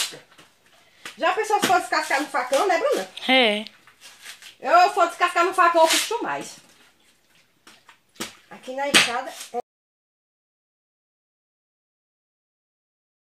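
At 9.6 s the sound just stops mid-flow and never comes back. What's left, about 3.7 s through to the end, is an audio dropout to silence: dead silence, not even room tone underneath. That total absence is the giveaway. The input was likely lost at that moment, maybe a disconnected device, a failed link or a stray mute, while the recorder kept writing. Whatever happened after that point simply isn't there.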